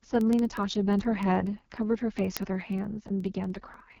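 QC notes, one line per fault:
Throughout: AMR wideband (HD Voice) codec. The speech is coded at the codec's lowest rate, 6.6 kbit/s, and the damage is heavy. The vocal tract model rebuilds the voice from a sparse pulse excitation, so at this rate it comes out rough and raspy. Above 6.4 kHz only shaped noise fills in, and nothing is present above 7.2 kHz.
0.15 to 3.98 s: word clock ticks. A sharp tick comes at a steady rate of roughly one every 70 ms, around seventy in all, and their strength is uneven. The receiving device runs on its own clock, which drifts from the sender's by something like 400 ppm. Each time the two clocks slip past each other, a single sample is dropped or repeated and the neighbouring samples are misread, which leaves a brief discontinuity in the waveform.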